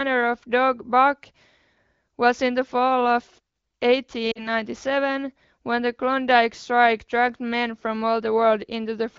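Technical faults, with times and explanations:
4.31 to 4.47 s, lost AMR speech frames: the sound briefly smears and sags, then picks back up a little weak and rough. About 40 ms of coded speech, consistent with two consecutive 20 ms frames, failed to arrive intact, so the AMR wideband decoder repeated the last good pitch and vocal tract settings while ramping the gain down. Wideband concealment fades quickly, hence the short dip, heard against otherwise clear HD Voice coding.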